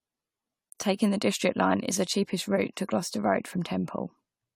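Speech with generation loss throughout: swirly, hollow and smeared, nothing above 18.6 kHz, likely from around seven passes through an AAC-LC encoder near 96 kbit/s.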